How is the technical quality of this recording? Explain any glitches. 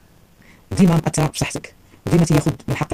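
Poor, because of one fault running through the whole recording: a block size mismatch (truncated). Each incoming block is longer than the next stage reads, so the tail of every block is discarded. That sets up a steady 188 Hz buzz and makes the sound run 1.88 times faster, which fits a 256-sample read. Unlike a sample-rate error, the pitch stays roughly normal even though everything rushes past.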